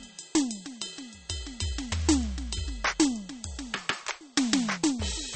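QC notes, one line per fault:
throughout, MP3 compression: nothing above 8.4 kHz, with plainly audible watery swirl that a clean low-pass wouldn't add; likely an encoder starved at around 32 kbps.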